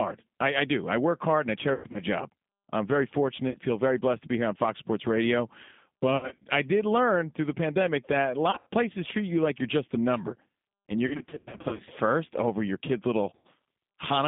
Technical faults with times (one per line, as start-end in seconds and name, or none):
0.00-14.28 G.729 codec
1.74-2.01 VoIP packet loss concealed by the speech codec
3.50-3.58 VoIP packet loss concealed by the speech codec
6.17-6.45 VoIP packet loss concealed by the speech codec
8.51-8.68 VoIP packet loss concealed by the speech codec
11.07-11.89 VoIP packet loss concealed by the speech codec
13.35-13.47 VoIP packet loss concealed by the speech codec